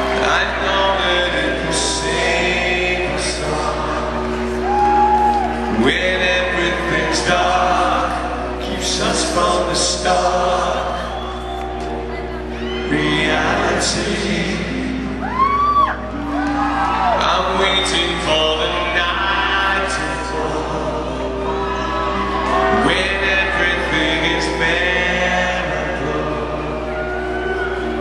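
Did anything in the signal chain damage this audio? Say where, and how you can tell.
Yes. Mains hum runs through the whole clip as a steady 60 Hz tone with low harmonics, loud enough to sit only about 10 dB under the sound itself. It points to the analogue wiring, where a ground loop or a nearby transformer is coupling the power line into the signal.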